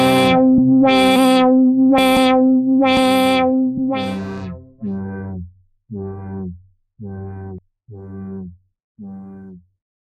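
A recording of everyday sounds, with three abrupt skips at 1.98, 4.78 and 7.58 seconds where a slice of roughly a fifth of a second just vanishes and the two sides butt straight together, no gap. The even spacing gives it away: this is most likely audio missing between chunks, with the recorder handling 3-second blocks and dropping a bit each time it hands over to the next one, which is why the jumps land 2.8 seconds apart.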